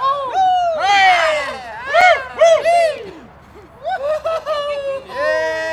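At 2.01 s there is a block of digital silence. For about 5.8 ms the sound drops straight to silence and returns with no fade. With a gap this short, it is heard as a tick or dip rather than as silence. The gap's length fits a 256-sample output buffer that was not filled in time.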